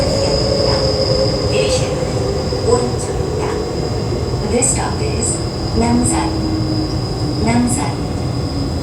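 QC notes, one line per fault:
No faults were heard in this recording of sounds. Nothing in it needs a QC entry.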